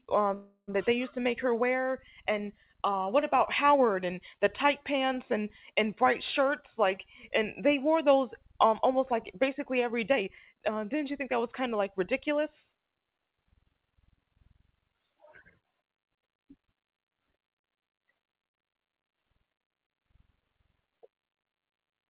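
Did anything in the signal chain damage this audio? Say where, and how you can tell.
Yes. At 0.34 to 0.77 s a call audio freeze occurs in the buffer stage: the last sound stretches into a fading buzz or hiss, drops to about 80 ms of silence, then resumes exactly where it stopped. This likely reflects delayed packets draining the jitter buffer, which inserts a gap without losing audio.

Jitter buffer speed-up appears twice: 6.03 to 7.61 s at 103% speed, trimming roughly a twentieth of a second, and 10.09 to 12.39 s at 113%, trimming about 0.3 s. Speech in the second sounds hurried at unchanged pitch because the receiver repeatedly cut pitch-period-length slices to shed excess buffered delay. The G.711 path's band limit at 4 kHz is also audible.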